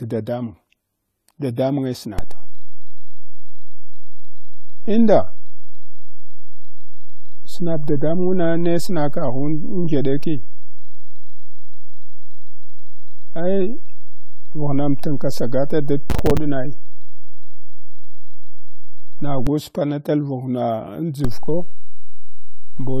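Throughout the speech, a low-bitrate encode was likely saved again at a high bitrate, so the first encode's artefacts remain, pointing to a lossy source near 32 kbit/s.

At 2.19 s a DC step shifts the waveform's zero line, heard as a low thump; the offset holds until 19.47 s. A second step at 21.25 s holds to the end.

From 16.10 to 16.37 s, processor overload crackle: roughly ten buffers, which fits buffers of about 5 ms, missed their deadlines and dropped to silence, producing gritty tearing over the speech.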